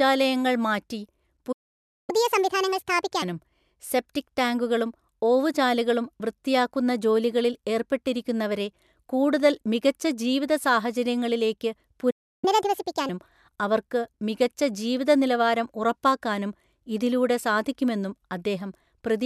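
At 1.52 s the speech cuts out for about 0.56 s, until 2.10 s. This is a playback stall. The player was likely starved of data or blocked, so its output fell silent. A second stall follows at 12.10 s, lasting about 0.32 s, until 12.45 s. It sounds the same: an abrupt gap in mid-flow, then the sound picks up again.

Each stall is followed by catch-up at higher speed. From 2.10 to 3.22 s, and again from 12.45 to 13.09 s, the player runs its backlog at 1.5 times normal speed. It does this by resampling, so pitch rises with tempo, by roughly seven semitones. The speech sounds hurried and chipmunk-like. Once the lost time is recovered, speed and pitch drop back to normal.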